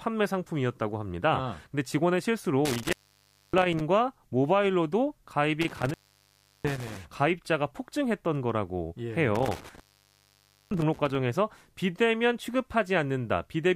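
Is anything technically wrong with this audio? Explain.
Yes. The speech has an intermittent contact fault, with dropouts at 2.65 to 3.81 s, 5.61 to 6.97 s and 9.36 to 11.15 s. A loose plug or cable connection briefly breaks the signal path, so the speech cuts out for about 0.61 s, 0.71 s and 0.92 s respectively. Each break is framed by crackle as the contact scrapes open and closed, and faint hiss remains while the line is open.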